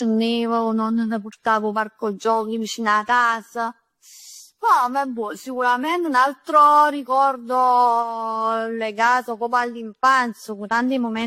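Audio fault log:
throughout generation loss: swirly, hollow, smeared speech with blurred attacks and nothing above 16.5 kHz, likely from about seven passes through a 64 kbit/s AAC-LC codec.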